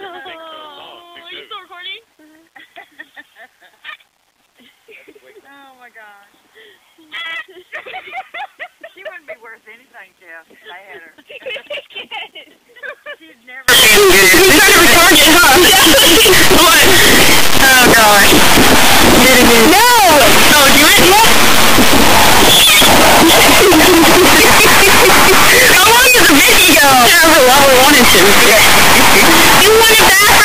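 From 13.68 s to the end, the sound becomes a loud, harsh distortion with quiet passages as loud as the rest, likely signed and unsigned mixed up in the 8-bit samples.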